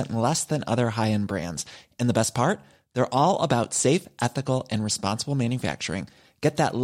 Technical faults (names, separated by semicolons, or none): none